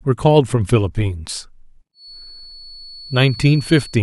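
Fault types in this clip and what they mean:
Feedback whistle: From about 1.92 s to the end of the speech, a thin, steady whistle near 4.4 kHz sits behind the talking, around 20 dB below it, swelling and fading slowly in level while holding its pitch. This is likely a loudspeaker-to-microphone loop hovering right at the threshold of feedback, so that single frequency keeps recirculating and sustains itself without building into a full runaway howl.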